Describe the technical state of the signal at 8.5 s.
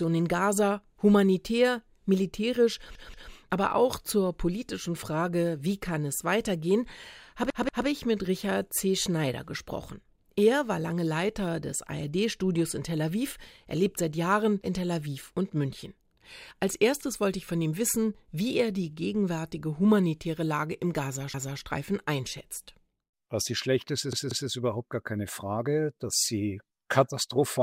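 At 8.5 s the signal is intact, with no audible fault.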